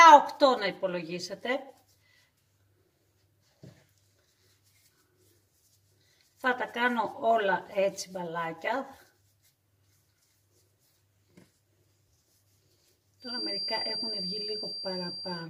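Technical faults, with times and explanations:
13.18 to 15.50 s, feedback whistle: near the end a thin, steady tone at 4.7 kHz comes in behind the sound and stays until the clip finishes, sitting roughly 10 dB under the main signal and slowly swelling and fading in level. The likely cause is a loudspeaker-to-microphone loop hovering right at the edge of feedback, so that single frequency keeps ringing without quite building into a runaway howl.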